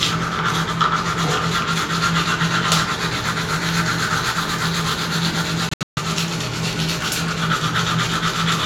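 A recording of sounds with one fault: a Bluetooth dropout between about 5.69 and 5.99 s. The audio breaks into silent gaps totalling roughly 230 ms, scattered across that window, with the longest single hole about 140 ms. When it comes back it has moved on, as if it kept playing. The likely cause is packets not reaching the headphones in time and being dropped.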